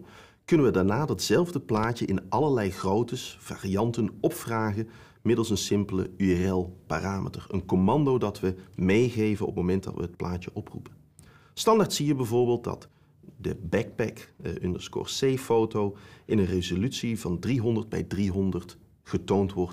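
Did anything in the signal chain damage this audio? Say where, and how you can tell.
Yes. A loud pop, a quick double pop between 1.77 and 1.86 s, peaks about 5 dB above the surrounding sound, which carries on underneath. On a waveform it shows as two sharp spikes; a spectrogram shows brief broadband vertical lines. Likely an analogue-wiring transient, such as a plug or switch contact.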